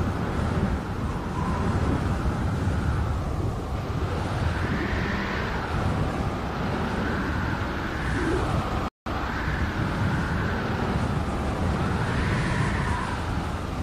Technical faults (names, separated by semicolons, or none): playback stall